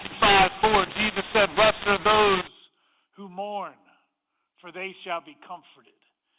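A speech recording over G.711 telephone coding that suffers a mu-law and A-law mix-up from 0 to 2.47 s: mu-law samples decoded as A-law scramble levels, making speech harsh and filling pauses with hiss. The waveform shows jagged, uneven amplitudes and a raised noise floor between phrases.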